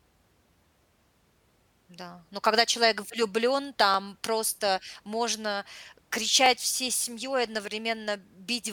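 The speech was processed in 2.5-second chunks that overlap, each one starting 20 ms before the previous chunk ended. At every join, that 20 ms replays as a brief click or stutter: at 3.94 s, after "но когда человек влюблен" and before "просто можно", and at 6.46 s, just before "всей семьей".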